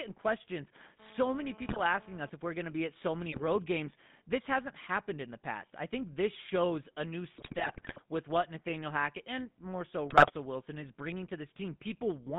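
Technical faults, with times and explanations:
throughout: GSM full-rate codec. The speech has the buzzy, gravelly roughness of the first GSM coder. It models the vocal tract and drives it with a sparse, regularly spaced pulse train. Only every third excitation sample survives, so fine detail in the voice turns coarse and grainy. The band runs only from about 150 Hz to 3.6 kHz, so highs and deep lows are gone. The damage is plainly audible and fits a 13 kbps full-rate stream.
1.0 to 2.3 s: GSM phone buzz. A hard, raspy buzz at 217 Hz, rich in harmonics, sits on top of the speech. It is steady while it lasts, which fits a 2G phone in a call nearby. The phone transmits in bursts 217 times a second. The audio circuit rectifies those radio pulses into sound. The buzz has nothing to do with the speech itself. It runs about 22 dB below the speech level.
1.68 to 1.80 s, 3.32 to 3.42 s, 7.34 to 7.99 s, 10.10 to 10.31 s: GSM bit errors. 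The speech breaks into squawks, pops and gargling. The first burst falls inside the buzz. The second comes just after "to be at so". The longest and worst runs from just after "this shows a new" to "with what". The last follows "and more so". Corrupted filter, pitch and gain values bend the spectrum or spike the level frame by frame, as on a weak link.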